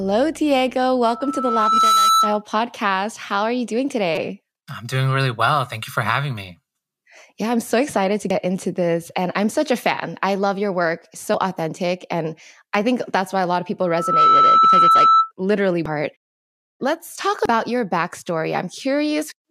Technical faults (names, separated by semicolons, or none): dropped samples; loudspeaker feedback squeal; damaged data in a compressed stream